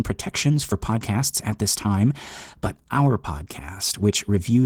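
Throughout, the speech shows Opus voice compression. Coarsely coded excitation makes it plainly hoarse and slightly robotic. That fits a low bitrate near 16 kbps.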